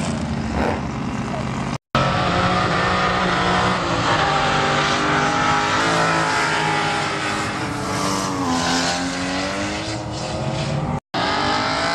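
From 3.78 to 5.8 s, clock-matching software likely changed the playback rate in a single drift correction step to refill or drain its buffer, far beyond the small adjustments such systems normally make. The audio runs about 6.4% slow across that stretch, and because speed and pitch move together, everything drops by 114 cents, a little over a semitone, with a sudden detuning at 3.78 s before the original rate returns at 5.8 s.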